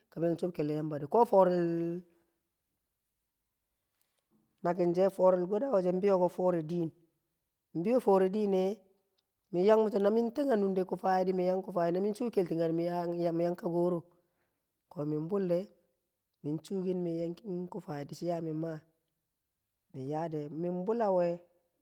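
At 0.57–0.59 s and again at 17.21–17.23 s, a lost packet is rebuilt from error correction. Each 20 ms stretch, consistent with a single dropped packet, is replaced by a low-bitrate copy carried in the following packet. So nothing goes silent, but the speech turns briefly rough and noisy. On a waveform there is no gap. A spectrogram shows a short smeared, grainier patch.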